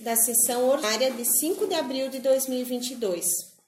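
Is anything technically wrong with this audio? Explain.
Yes. From 0.80 to 0.84 s a brief glitch cuts into the audio, lasting about 44 ms. It comes from damaged data in the compressed stream. A stretch of the encoded bytes was corrupted, so the decoder either misread those frames as garbage or threw them away. It lost sync and had to hunt for the next valid frame header before normal playback could resume. That short corrupt burst is what produces the blip.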